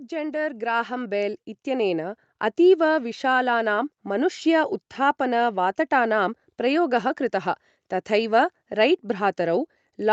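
Right from the start, at about 0.09 s, there's automatic gain rising. The call's gain control decided the input was too quiet and pushed the level up gradually, by about 9 dB, until roughly 2.25 s. You hear the speech and the background noise swell together over those two seconds rather than jump, which is the giveaway that it's the gain stage and not the talker getting louder.

Inside that ramp, from 0.31 to 0.37 s, there's a lost packet rebuilt from error correction. About 40 ms of audio went missing, which fits two 20 ms packets. The Opus decoder filled it from the low-bitrate backup copies carried in the following packets, so there's no dropout. Those frames come out rougher and grainier than the surrounding speech, a brief rough patch rather than a silence. Since this call is already limited to 8 kHz, there's no separate top-end dip on top of that.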